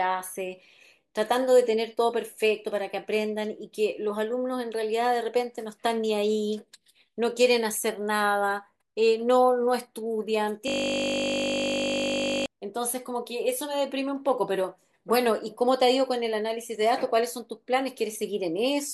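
Speech clip with a system hang loop from 10.68 to 12.46 s: one 20 ms slice of audio repeats exactly, about 90 times, giving a steady 50 Hz buzz. The waveform shows an identical repeating cell, and the spectrogram shows flat harmonic stripes at 50 Hz multiples.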